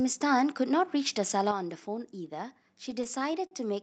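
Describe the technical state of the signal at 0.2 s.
At 0.2 s the signal is intact, with no audible technical fault at that moment.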